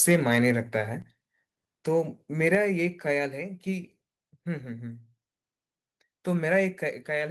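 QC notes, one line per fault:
1.02 s, 2.55 s and 6.87 s, microphone volume stepped down: the speech and the background drop together in one instant step, by about 5 dB, then about 4 dB, then about 3 dB. The likely cause is call software lowering the input volume. Unlike compressor pumping, the level never recovers.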